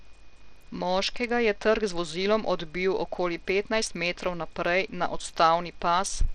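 From start to finish the speech has a dull, gritty quality: the treble thins out and flickers, and a rough noise with aliasing rides on it. This is likely Bluetooth SBC compression with a small bit pool, consistent with about 80 kbps, starving the upper sub-bands.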